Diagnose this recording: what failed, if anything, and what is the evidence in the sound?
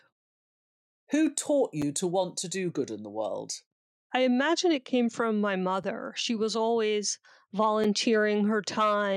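The failure is in chunked delivery at the storage or playback stage: the audio was split into 2.0-second chunks, and the joins were not butted together. This leaves a gap between chunks, about 6.5 ms of hard-edged silence, at 1.82 s (just before "to want to do"), 5.83 s (right after "it came from my") and 7.84 s. The holes fall on the 2-second grid, which shows that the interruption comes from the chunk boundaries rather than from the sound itself.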